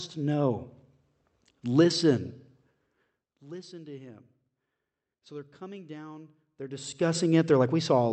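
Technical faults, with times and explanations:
No technical faults can be heard in this speech.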